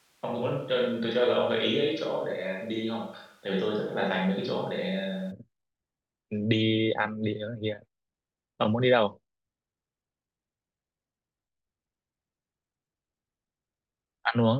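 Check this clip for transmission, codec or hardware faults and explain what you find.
One fault is present: a switch to a distant microphone, already under way when the clip begins and lasting until 5.3 s. Over that stretch the speech sounds roomy and hollow and thin in the bass, with faint room noise sitting roughly 35 dB below it, though the level hardly changes. At 5.3 s the close, full sound returns abruptly. The likely cause is a missing close-microphone feed, with a farther microphone picking up more of the room.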